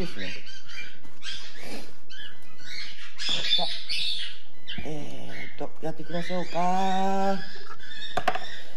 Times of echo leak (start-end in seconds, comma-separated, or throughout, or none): none